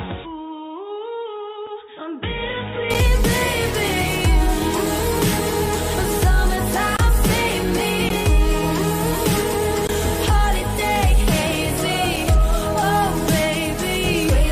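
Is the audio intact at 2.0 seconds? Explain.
No. From 0.0 to 2.90 s the sound is dull and boxy, with nothing above 3.8 kHz, a level about 5 dB lower and a faint new noise floor well below it. The likely cause is an input switched to a poorer device, whose narrower band and different character replace the normal input until 2.90 s.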